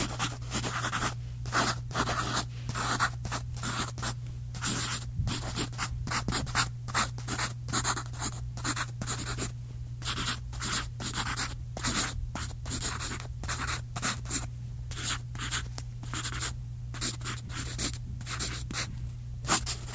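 Nothing stood out on listening to this recording of sounds.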